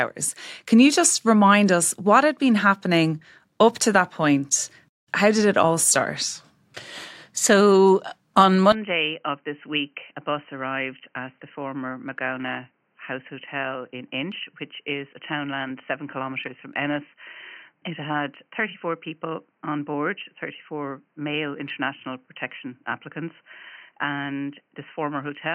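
Speech that changes character abruptly at 8.72 s and stays that way to the end: from that point the sound turns dull and boxy, with nothing above 3.1 kHz, it drops roughly 10 dB in level, and a faint new background noise appears, all with no silence at the join. This points most likely to the input switched to a poorer device. On a spectrogram the upper band vanishes at a hard edge; the waveform visibly shrinks.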